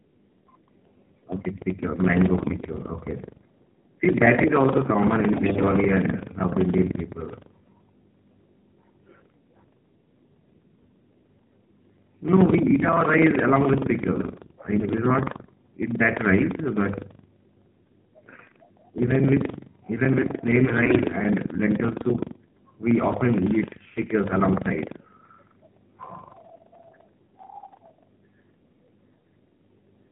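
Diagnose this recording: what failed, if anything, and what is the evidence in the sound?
Driver or buffer stage: buffer tearing. A steady robotic rattle at about 23.4 Hz runs through the whole recording, which fits a 2048-sample buffer. The writer and the hardware reader have slipped, so a small slice of each buffer replays audio from about 150 ms earlier, with hard joins on both sides.

Codec stage: AMR narrowband mobile codec. Throughout, nothing above 4 kHz survives, and the speech has the buzzy, synthetic quality of AMR-NB at a low rate, consistent with 7.4 kbps. The vocal-tract model driven by sparse pulses leaves plainly audible coding damage.

Network stage: AMR bit errors. The voice turns hoarse, scratchy and gargly at 2.40–2.56 s, 5.32–5.65 s, 14.20–14.56 s and 20.63–21.00 s while holding its pitch and level. Weakly protected bits in those frames arrived corrupted, misplacing the excitation pulses and skewing gain and spectral values.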